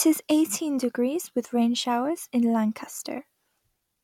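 Nothing in the speech stood out as a technical problem on listening.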